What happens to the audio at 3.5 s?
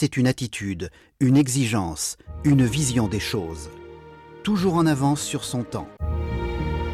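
Nothing goes wrong at 3.5 s: the audio plays through that moment intact, with no dropout, click or other fault.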